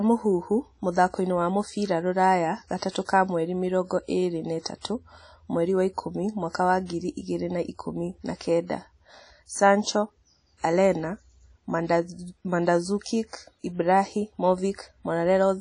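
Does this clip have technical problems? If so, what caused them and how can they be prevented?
Yes. WMA compression throughout the speech gives a washy, ringing hiss that breathes with the signal. The spectrogram shows a hard ceiling with nothing above 10.1 kHz, which fits a low bitrate around 32 kbps. This is likely coarse transform quantisation. Prevent it by encoding at a higher bitrate or losslessly.

Pre-echo puts short hiss before attacks at 2.91 s, just after "mũthakoini wa mũbĩra rũraya", spreading 38 ms, and at 6.50 s, after "ĩtatũ mweri wa ikũmi", spreading 47 ms. It shows as a low smear preceding each waveform onset, because block-wide noise fills the quiet lead-in. Prevent it with shorter transform blocks or a higher bitrate.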